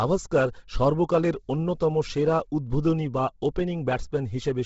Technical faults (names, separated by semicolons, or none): Bluetooth LC3 compression